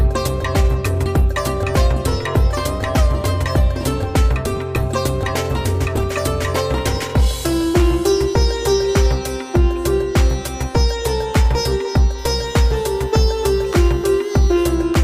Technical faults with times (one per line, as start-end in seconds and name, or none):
12.18-14.75 USB whine